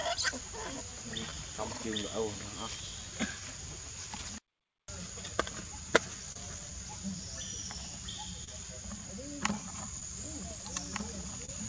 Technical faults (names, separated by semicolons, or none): clock drift between sender and receiver; repeated timing corrections; short stall from a late packet; doubled audio track